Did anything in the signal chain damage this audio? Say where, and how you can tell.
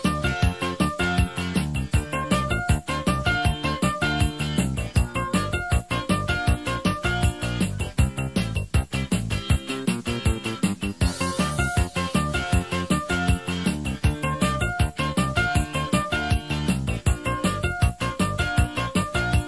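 No, nothing along the chain left an audible mark on this signal, so there is no stage to point to and no damage to explain.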